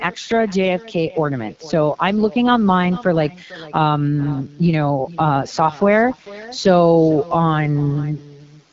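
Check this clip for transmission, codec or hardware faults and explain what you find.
Two faults run through the whole speech clip.

Echo with no canceller is present from start to finish. The far end's loudspeaker feeds its microphone, and nothing removes it. Each phrase returns roughly 0.4 s later as a faint copy, about 20 dB down and thinner.

The AMR wideband (HD Voice) codec also colours the entire clip. Its vocal tract model codes speech coarsely here, which fits one of its lowest rates, likely 8.85 kbit/s. The result is plainly rough and raspy. Nothing is heard above 7.5 kHz.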